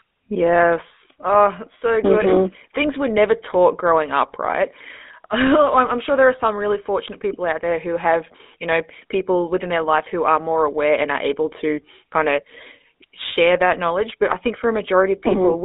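From start to finish the speech has a buzzy, gravelly roughness, thin and boxed in, with nothing below about 250 Hz or above about 3.6 kHz. This is the GSM full-rate codec, and its damage is plainly audible. The codec models the vocal tract and rebuilds the excitation from a sparse grid of regular pulses, discarding most of the original detail. That coarse pulse train produces the grainy buzz, and the sound fits a 13 kbps full-rate stream.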